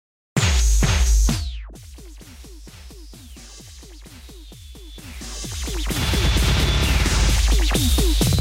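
No technical faults can be heard in this audio.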